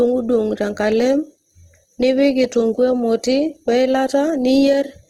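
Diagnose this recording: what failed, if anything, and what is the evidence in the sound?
The codec stage failed. Throughout, the speech sounds grainy and rough, with a noisy texture in place of clean tones. Nothing lies above 18.8 kHz. This is likely Opus compression in its music mode, pointing to about 16 kbps, where starved bands are filled with folded or noise content.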